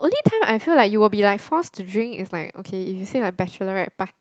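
Nothing goes wrong in this bit of speech; it comes across just as you'd expect from audio that's been through an ordinary call connection, with the codec and jitter buffer doing their usual job.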